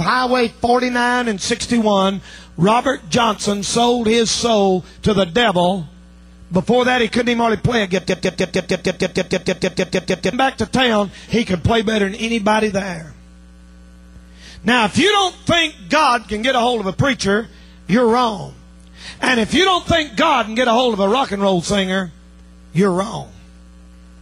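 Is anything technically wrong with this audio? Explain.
Yes, there are two faults.

An unreliable data bit from 3.22 to 3.89 s: one marginal data line flips its bit at random, producing equal-sized spikes heard as a continuous crackling fizz.

A broken-record loop from 8.09 to 10.33 s: a 154 ms fragment repeats exactly, back to back, 15 times, likely from a stalled stream, and the intended audio there is lost.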